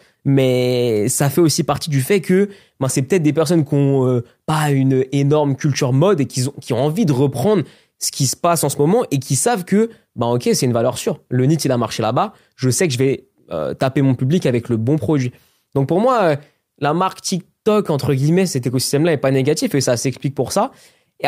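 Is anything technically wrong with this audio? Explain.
No, nothing technically wrong turns up anywhere in this speech recording, so there's nothing here to flag.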